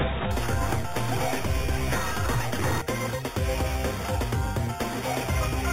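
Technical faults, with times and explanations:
0.31 to 5.73 s, imaging from sample-and-hold upsampling: a bright, metallic fizz rides on top of the sound, rising and falling with its level and sitting about 15 dB below it. The first mirrored copy fills roughly 4 kHz to 8 kHz and moves opposite to any pitch movement. This fits audio raised from 8 kHz to 48 kHz by simply repeating each sample. Without a smoothing filter, copies of the original spectrum fold out around every multiple of 8 kHz.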